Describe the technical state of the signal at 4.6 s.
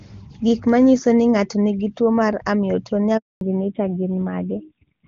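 At 4.6 s the call is in a fallback to narrowband, which runs from 3.41 s to the end. The wideband link has switched to a narrowband codec, consistent with AMR-NB near 7.4 kbit/s. Nothing above 4 kHz survives, so the sound is duller and rougher.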